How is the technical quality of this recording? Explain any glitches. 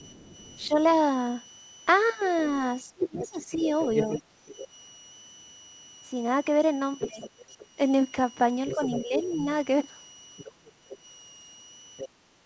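The recording has clear technical faults: a constant whistle, the far-end talker leaking in, the near talker being ducked, and the background dropping out near the end.

Switching supply whistle, throughout: a power supply is running in an audible mode, producing a high whistle near 3 kHz, drifting between about 2.85 and 3.01 kHz, at roughly 25 dB below the speech.

Other side's voice leaking through, 0 to 4.68 s and 6.99 to 12.09 s: the echo canceller has likely failed to remove the loudspeaker's playback, so a second voice is audible underneath, roughly 15 dB down at first and closer to 10 dB down later.

Speech suppressed in double talk, at 0.67 to 0.74 s, 2.82 to 4.11 s and 7.07 to 9.47 s: with both sides talking, the canceller likely mistook the talker for echo and turned the microphone down. The dips are brief and shallow at first, then around 20 dB deep for about a second, then around 10 dB in patches.

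Background gated by the echo canceller, from 10.53 s to the end: the canceller clamps the microphone while the loudspeaker plays, and the room sound drops out by about 12 dB before it can recover.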